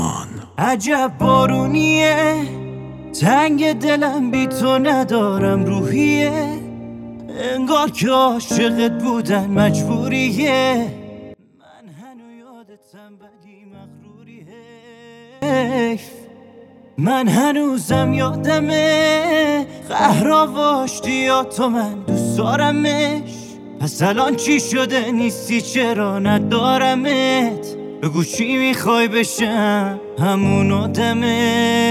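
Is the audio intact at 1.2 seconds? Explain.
Yes, the audio is intact at 1.2 seconds, with no audible fault at that moment.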